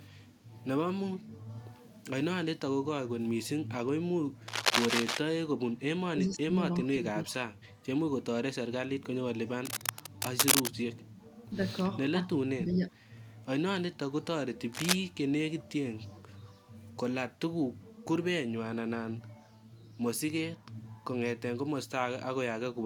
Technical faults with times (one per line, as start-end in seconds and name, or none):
4.48-5.17 cable scratch noise
6.13-6.55 speech suppressed in double talk
6.85-7.34 speech suppressed in double talk
9.65-10.69 cable scratch noise
12.56-12.92 speech suppressed in double talk
14.73-14.94 cable scratch noise
16.13-16.18 echo leak